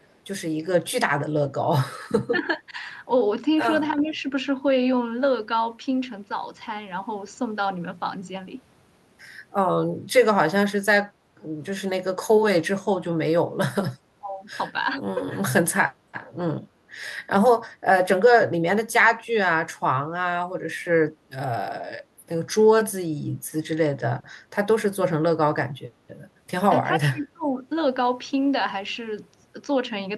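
From 0.03 to 0.12 s there is a faint delayed copy of the speech, an echo leak arriving about 400 ms after the original and sitting far below the main level. The likely cause is a loudspeaker at the far end whose echo canceller did not fully remove what its microphone picked up, so a residue of the returned signal was sent back into the call.

Between 2.29 and 27.65 s the speech level drops in short patches. The likely cause is speech suppressed in double talk: with both ends active at once, the echo canceller could not separate the local talker from the loudspeaker echo and attenuated both. At 2.29 to 2.34 s there is a brief dip of roughly 15 dB. At 2.57 to 2.78 s and 4.02 to 4.25 s the dips are shallow, only a few dB, but last longer. At 14.19 to 14.38 s the drop is again around 15 dB. The deepest is at 26.98 to 27.65 s, a pull-down of roughly 25 dB lasting about half a second.

At 11.14 to 11.4 s the room background dips by about 7 dB for roughly a third of a second and then recovers. 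This is background gated by the echo canceller: while the loudspeaker was playing, the canceller clamped the microphone gain, so the ambient noise floor sank briefly and returned when the canceller released.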